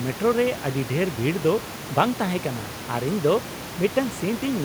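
Nothing is technically wrong with this speech recording. The room noise of the space around the microphone sits about 15 dB below the speech and belongs to the recording itself.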